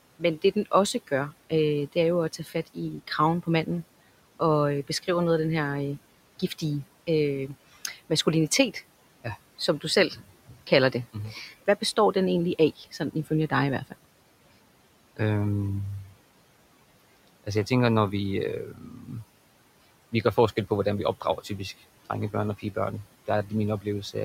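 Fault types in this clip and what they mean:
Noise suppressor artifacts, throughout: the suppressor judges which frequency bands hold steady noise and turns them down frame by frame, here by about 18 dB. The room noise, which sits about 20 dB below the speech and belongs to the recording itself, sinks away in the pauses and returns under the speech, so the background pumps in and out with each phrase instead of staying constant.
Speech cut by the noise suppressor, at 0.19–3.67, 6.39–12.15, 12.78–14.06, 18.66–19.11, 20.12–21.6 and 22.33–24.15 s: the suppressor mistook parts of the speech for noise and pulled them down with the background, by about 10 to 16 dB at the deepest points. The second and third stretches sit either side of "egentlig af". Quiet sounds and word endings come out swallowed, adding up to roughly two seconds in all.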